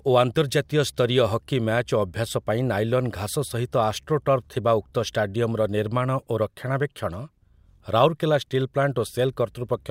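No technical faults can be heard anywhere in the speech. There is nothing to mark at any point in the recording.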